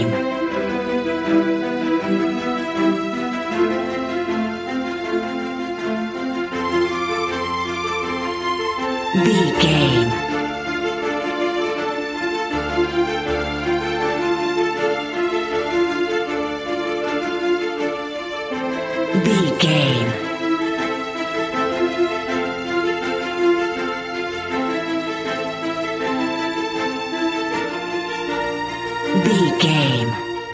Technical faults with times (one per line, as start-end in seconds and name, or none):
none